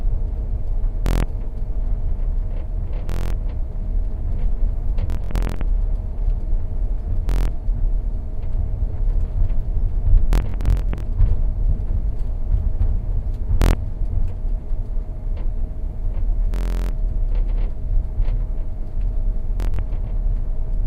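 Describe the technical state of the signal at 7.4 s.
At 7.4 s the signal is inside a Bluetooth stutter running from 7.29 to 7.48 s. Audio packets arrived late or not at all, so the receiver kept replaying its last short buffer, giving a rapid buzzing repeat. About 186 ms of sound is lost, and playback resumes further along.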